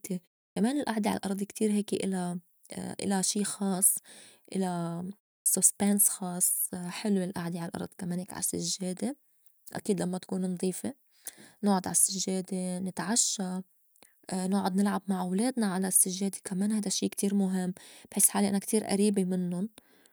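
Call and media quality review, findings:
Clipped start after a pause: output device sleeping through silence, slow to wake or relock, swallowing onset. 0.52–0.56 s, about 43 ms lost before "الئعدة عالأرض كتير هيك"; 5.42–5.46 s, about 39 ms lost after "شي خاص إلا". Both after roughly 0.3 s silence.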